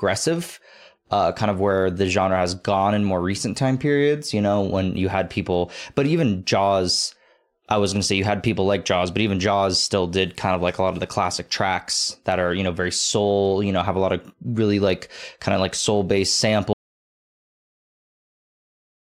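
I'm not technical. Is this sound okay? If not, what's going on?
No. At about 16.7 s, right after "of like soul based", the speech cuts off abruptly and the clip stays completely silent until the end. This is an audio dropout to silence, likely from the input being lost, such as a loose connection or an accidental mute, while recording carried on. Unlike a natural pause or a fade-out, even the background sound of the room disappears at once, so whatever followed is gone.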